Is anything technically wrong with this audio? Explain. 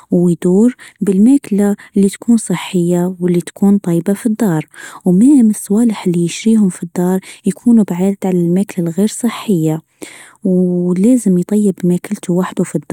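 No, nothing in this speech recording points to a technical fault. It contains no event that calls for a fix.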